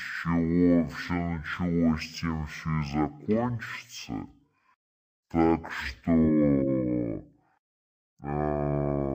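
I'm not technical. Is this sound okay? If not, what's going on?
No. The speech plays at half its normal speed for the whole clip, and every sound sits a full octave lower than it should. This is a fault called stereo read as mono. A stereo recording stores left and right samples in turns. Here they were read one after another as a single track. Each moment of sound is stretched to twice its length. That makes everything slow, deep and dragging.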